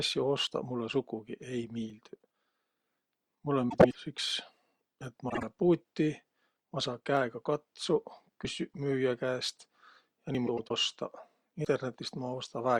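At 0.47 s and 1.90 s the speech skips forward with no gap, most likely a dropped buffer (overrun): samples were overwritten before being read, and the two sides were joined directly. Each loss is short, around 20 ms. At 5.01 s there is another small jump, and at 8.45 s, just before "müüjä käest", a larger one of roughly 70 ms. At 10.35 s about 40 ms goes missing, and at 11.65 s around 70 ms. Unlike a swap, each of these removes time, so the speech leaps ahead.

From 3.69 to 3.95 s, from 5.29 to 5.43 s and from 10.47 to 10.71 s, frames are out of order. Two adjacent runs were decoded in reversed sequence, with blocks of about 105 ms in the first and last stretches and about 52 ms in the middle one. The result is a garbled flutter, while the timing stays intact because nothing is lost.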